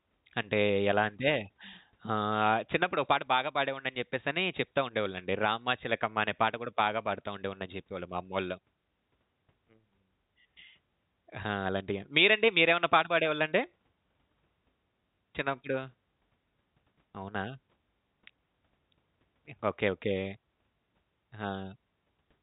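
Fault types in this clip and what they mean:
Nothing faulty can be heard in this speech recording.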